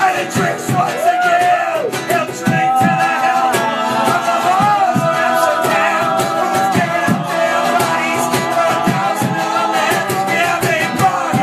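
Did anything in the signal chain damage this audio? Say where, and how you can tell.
No, nothing in the signal chain audibly damaged this audio; no stage leaves a mark on the signal.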